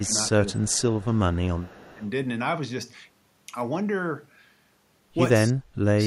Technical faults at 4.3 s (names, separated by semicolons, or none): none